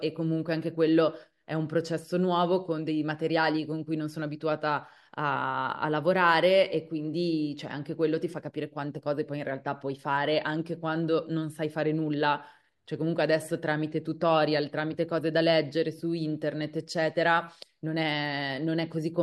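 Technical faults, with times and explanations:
No technical faults can be heard in the clip.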